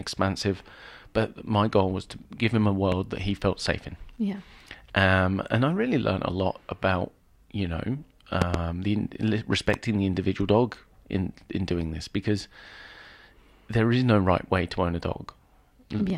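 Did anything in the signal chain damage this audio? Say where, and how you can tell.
Yes. Loud pops hit at 2.92 to 2.94 s, 8.42 to 8.57 s (two in quick succession) and 9.74 to 9.76 s. They peak about 15 to 20 dB above the speech, which carries on underneath. A sudden voltage pulse, likely from the analogue wiring, was added.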